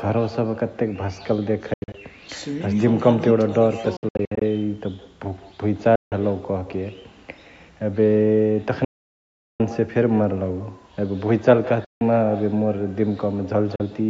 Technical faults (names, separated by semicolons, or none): echo with no canceller; Bluetooth dropout